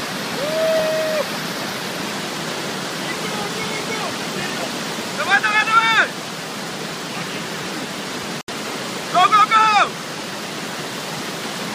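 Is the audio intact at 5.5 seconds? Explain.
Yes, at 5.5 seconds the audio is intact, with no dropout, click, distortion or other fault at that point.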